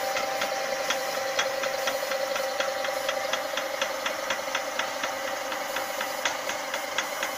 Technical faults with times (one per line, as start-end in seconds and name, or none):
0.00-7.38 USB whine